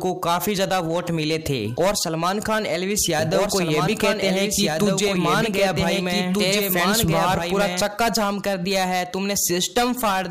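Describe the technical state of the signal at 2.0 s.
At 2.0 s the signal is intact, with no audible fault at that moment.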